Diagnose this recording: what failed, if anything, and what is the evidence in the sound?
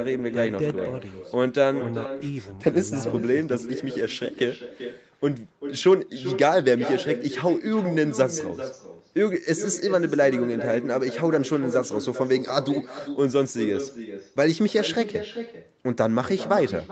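The fault is echo with no canceller, in the call-processing stage at the far end. The speech is shadowed throughout by a second copy arriving around 400 ms later. That copy sits about 11 dB below the direct speech and sounds thinner. The far side played the call on a loudspeaker, and its microphone picked it up. Nothing cancelled it, so the sound returned after the network round trip. The echo shares the call's band, stopping at 8 kHz.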